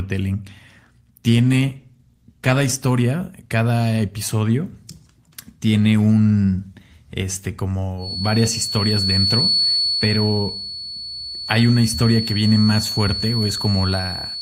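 A stretch of speech turns rough and watery from 1.4 s to about 2.85 s, with the top end dulled and muffled, before the sound clears again. That pattern marks a call bitrate drop. The connection's bandwidth estimate fell and the encoder was told to spend far fewer bits, which fits a fall from around 32 kbps to about 13 kbps. The coarser coding and lost high frequencies last roughly 1.4 s until the rate recovers.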